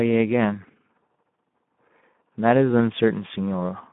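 The clip is speech, and Speex codec damage runs through all of it. The sound is confined to a telephone-like band of roughly 150 Hz to 3.5 kHz. Nothing is present above about 3.8 kHz, so no high-band fill is heard. Within that band the coding damage is plainly audible. The speech sounds rough and grainy, because too few bits are left to describe the excitation signal. The degree of damage fits a low bitrate of about 11 kbps.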